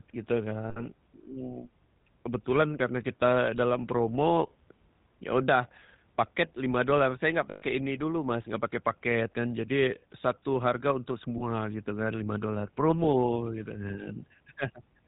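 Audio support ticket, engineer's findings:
GSM full-rate codec, throughout: buzzy, gravelly roughness on speech, nothing above 4 kHz. Sounds like 13 kbps full-rate coding, with pulse-train excitation thinned to every third sample.

Lost GSM frames at 0.7–0.84 s, 7.5–7.63 s and 11.38–11.42 s: rough metallic ring as the last good frame repeats. The gaps fit about three, six and one 20 ms frames.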